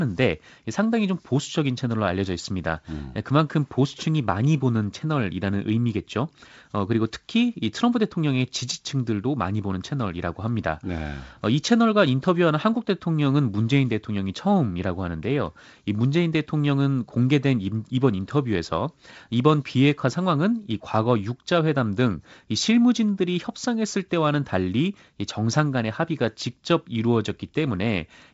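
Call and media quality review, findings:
No faults found in this speech recording. The G.722 wideband telephone coding path is audible as intended: content stops around 7.7 kHz, with a light hiss in the upper band and the slightly noisier lower band expected at 56 kbit/s.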